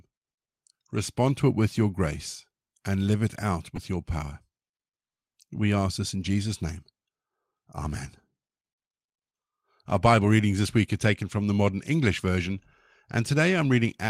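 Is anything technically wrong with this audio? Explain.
Yes. At 10.25 to 10.27 s, just before "readings this week are", a lost packet was rebuilt from error correction. The 20 ms patch sounds briefly rough and noisy, which fits a single lost packet.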